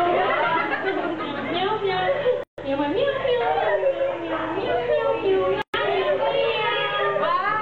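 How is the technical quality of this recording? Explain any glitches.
Two brief dropouts break the continuous sound: at 2.43 s a silence of about 145 ms, and at 5.62 s one of about 119 ms. Both have edges smeared by the codec, and the sound resumes exactly where it stopped. Each is a gap at a join of encoded pieces, left by the encoder's start-up delay and final-frame padding when separately encoded sections were butted together untrimmed.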